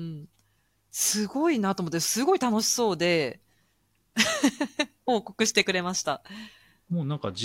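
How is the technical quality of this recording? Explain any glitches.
No technical faults are audible.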